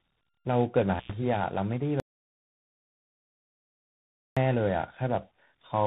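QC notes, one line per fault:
Throughout: tandem speech coding. The call passed through CVSD, A-law and 24 kbit/s ADPCM stages in turn, each recoding the last one's damage, so the speech sounds rough, muffled and noisy, with nothing above 3.8 kHz.
0.98–1.11 s: intermittent contact. A connection opened for about 98 ms, so the speech breaks off with crackle at each edge and only faint line noise in between.
2.0–4.37 s: audio dropout to silence. The input was lost for about 2.4 s, likely through a disconnected or muted source, and the gap is silent with no room tone.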